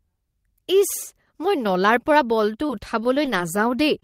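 Between 2.32 and 3.29 s, scattered short gaps appear: about five packets arrive late or never, about 40 ms of speech in all, none much over 20 ms. The receiver covers each hole by extending the preceding sound, leaving brief ticks, smears and small hiccups in otherwise clear speech.

At 4.00 to 4.04 s, a short concealed packet loss drops about 20 ms before the decoder gets it. Roughly 18 ms is filled by continuing the last sound and blending back, so the very end of the clip carries a quick smear or wobble.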